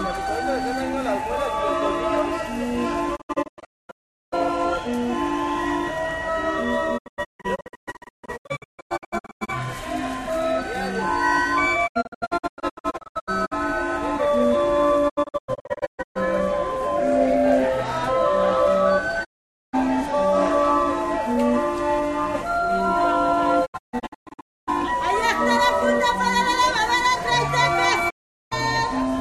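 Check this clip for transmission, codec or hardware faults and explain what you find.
There are seven digital broadcast dropouts. They fall at 3.15–4.34 s, 6.97–9.50 s, 11.86–13.53 s, 15.08–16.17 s, 19.23–19.75 s, 23.65–24.69 s and 28.09–28.53 s. Whenever incoming frames fail, the receiver mutes with a 20 ms fade and returns only once good data arrives. Most episodes break into scattered silent holes, up to 408 ms long at 3.15 s. The two at 19.23 s and 28.09 s are single gaps. Unlike analogue fading, there is no rising hiss. Unlike concealment, nothing smeared fills the holes: the sound is simply absent.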